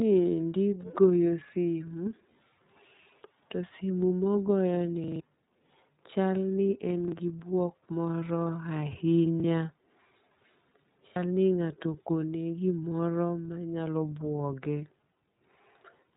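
Throughout, the speech passes through the iLBC codec at 13.33 kbps in 30 ms frames, so nothing above 3.8 kHz survives and the voice sounds rough and synthetic. A repeated buffer occurs when new audio arrives late and the last 40 ms buffer replays, causing brief stutters at 1.48, 7.08 (between "chal ni en" and "gi buok moro") and 9.4 s. A longer repeat follows "simo mogoyoni" at 5.04 to 5.2 s, and a double repeat occurs at 11.08 s.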